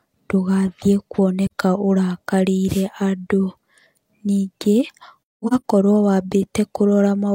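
AAC frame loss with muting at 1.47 s to 1.53 s: the decoder zeroed a missing block of spectrum, and the overlapping windows fade the speech out and back in, leaving a soft-edged gap of about 43 ms, consistent with a single dropped frame.

A wireless microphone noise hit from 2.67 s to 2.84 s: the analogue FM radio link faded as reflected signals cancelled, so receiver noise surged up through the speech, heard as a brief swish of static lasting under a fifth of a second.

AAC frame loss with muting again from 5.23 s to 5.63 s, now as several muted holes scattered across about 430 ms and totalling about 300 ms, which points to roughly seven lost frames. The longest run of silence lasts around a fifth of a second, so the speech stutters in soft dropouts.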